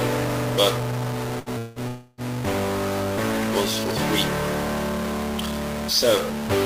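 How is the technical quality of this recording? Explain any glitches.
The recording has a constant distortion and a cluster of gaps between about 1.4 and 2.2 s.

Throughout the clip, a noisy distortion rides on the sound, following the shape of the waveform, and quiet passages are filled with noise instead of falling silent. This is likely a stuck bit: one bit of each sample is held at a fixed value, so roughly half the samples are shifted by that bit's weight. Because that bit also flips around the sign of small values, even near-silent stretches carry noise.

From 1.39 to 1.49 s there is a burst of packet loss. The last sound is drawn out and fades for about 67 ms, then the audio picks up again with about 60 ms of material gone. Packets failed to arrive in time, so the receiver covered the gap by continuing and lowering what it last had, producing a brief buzz or hiss before the jump forward.

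Two longer breaks follow, at 1.58 to 1.79 s and 1.88 to 2.21 s, likely caused by a long network dropout. In each, the last sound is extended as a fading buzz or hiss, lasting about 176 ms and then about 299 ms. It never reaches silence before the audio resumes. About 180 ms and 300 ms of material are lost, so the sound skips forward each time.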